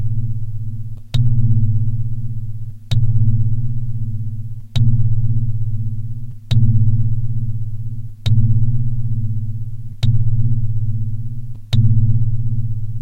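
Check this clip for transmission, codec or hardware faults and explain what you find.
No transmission, codec or hardware faults are audible anywhere in the audio.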